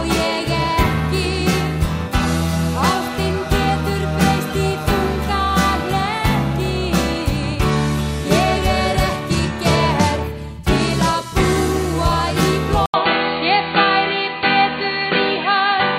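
At 12.86 s, after an 80 ms gap, the sound turns dull, with nothing above 4.6 kHz and a faint new noise floor: likely an input switched to a poorer device, not a filter.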